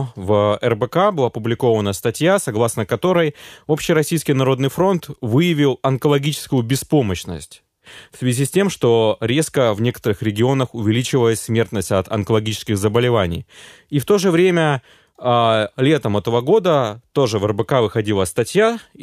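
Nothing stood out as a technical problem on listening to this speech recording.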